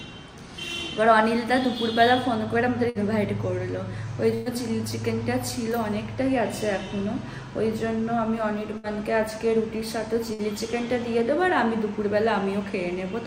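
Burst of packet loss occurs four times, at 2.89, 4.34, 8.78 and 10.33 s. Each time, about 60 ms of audio (120 ms at 4.34 s) never reaches playback. The receiver holds the last sound and fades it, giving a brief buzz or hiss before the audio resumes further on. On a spectrogram, frozen, repeating harmonic bands thin out and then jump abruptly to new content. The waveform shows a decaying repeated cycle.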